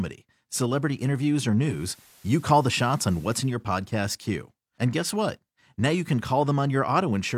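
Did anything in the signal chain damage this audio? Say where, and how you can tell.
Yes, at the radio's reception stage: digital radio blending to analogue from 1.60 to 3.59 s. Over a 273 ms cross-fade, FM hiss rises to roughly 30 dB below the speech, and level shifts about 3 dB as the receiver abandons the digital stream.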